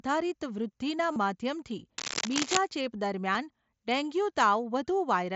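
At 1.12 s, for about 38 ms until 1.16 s, there is concealed Bluetooth headset packet loss. A short run of voice packets failed to arrive, which fits about five lost frames. The receiver filled the gap by repeating the closest-matching recent stretch of waveform. The speech briefly turns into a buzzy, steady tone at full level, then warbles slightly as real audio resumes.

From 1.98 s to 2.57 s, a dense, uneven scratching sits over the speech, about as loud as the speech itself. This is cable scratch noise. It is likely caused by a worn cable or connector being moved, so its contact resistance jumps around rapidly. It lasts roughly 0.6 s and sounds like rustling or grating.

At 3.34 s comes a second concealed packet loss, a single frame of about 7.5 ms. The patch is so short that it is nearly hidden. The mSBC wideband headset link carries the audio throughout, with its light graininess on louder passages.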